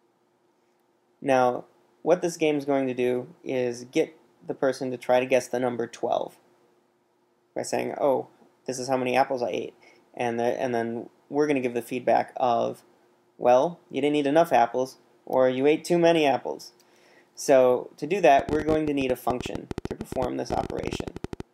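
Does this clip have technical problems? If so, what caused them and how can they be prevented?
Yes. A train of clicks runs from 18.39 s to 21.41 s, roughly 50 pulses at about 15 per second with uneven spacing, each peaking a few dB above the surrounding audio. The clicks share a similar shape and sit on top of the sound, including in quieter moments. The likely cause is impulsive interference from nearby equipment, a faulty connection or an unstable power supply. Prevent it by securing cables and connectors, using clean isolated power and keeping interfering equipment away from the recording chain.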